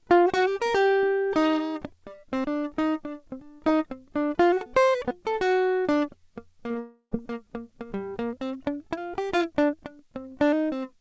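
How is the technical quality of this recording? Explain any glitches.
The recording has a cluster of network faults between about 6.68 and 7.13 s. It came through a G.722 call path, which leaves nothing above 8 kHz.

Short concealed packet loss occurs twice back to back, from 6.68 to 6.71 s and from 6.71 to 6.76 s. Each time about 20 ms of audio failed to reach the decoder in time. The decoder filled the gap by extending the preceding sound, which gives the music a quick smear or wobble.

A long network dropout follows, from 6.80 to 7.13 s, most likely because packet delivery stalled for about 0.32 s. The receiver stretched the last sound into a fading buzz or hiss, then about 80 ms of silence. The music returns with that stretch gone.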